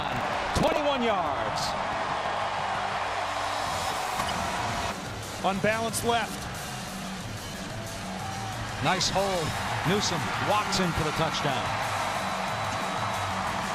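From 0 to 0.8 s, buffer tearing gives a rattling buzz near 23.4 Hz, which fits a 2048-sample buffer. Writer and reader have slipped, so a small slice of each period replays audio from about a tenth of a second earlier. At 4.17 to 4.30 s and again at 12.68 to 12.74 s, a corrupt frame decoded produces a short garbled burst. Damaged compressed frames, several in the first and a few in the second, were played with misplaced spectral energy.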